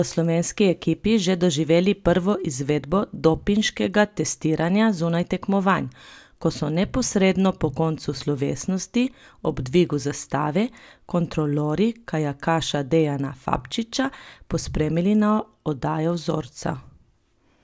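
A steady ticking runs through the whole clip, about 20 ticks per second, so close together that it merges into a buzz riding under the speech and disappearing in the pauses. This is a resampler restarted on every block: each 50 ms chunk was converted on its own, which fits a change from 24 kHz to 16 kHz. At every chunk boundary the filter lacked the real neighbouring samples, leaving a small error at each edge.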